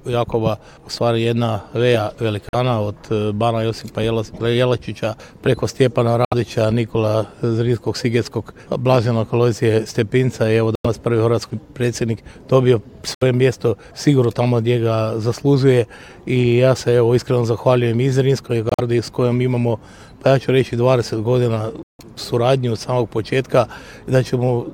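The audio drops out abruptly six times, at 2.49–2.55 s, 6.25–6.34 s, 10.75–10.86 s, 13.14–13.23 s, 18.69–18.80 s and 21.83–22.00 s. Each hole lasts from about 60 ms to about 175 ms, and the timing carries on unchanged afterward. This is corrupt frame muted: damaged compressed frames were rejected by the decoder and replaced with silence. The lengths point to several consecutive frames lost each time. On a waveform the gaps show as flat-line stretches, and on a spectrogram they appear as clean vertical blank bands with sharp edges.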